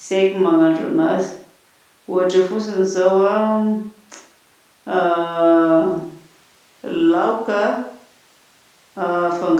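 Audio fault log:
No faults detected.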